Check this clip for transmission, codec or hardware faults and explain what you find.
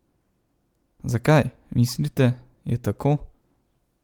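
No transmission, codec or hardware faults turn up in this speech clip.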